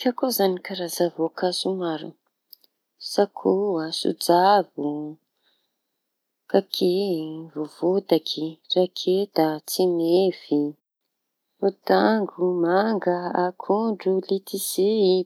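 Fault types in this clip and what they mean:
No fault types are present in this clip.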